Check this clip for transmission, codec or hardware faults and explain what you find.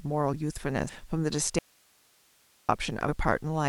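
There is one fault, an audio dropout to a faint residue. From 1.59 to 2.69 s the speech cuts off abruptly for about 1.1 s, leaving only low hiss roughly 35 dB down. The signal was likely lost upstream while the following path stayed live.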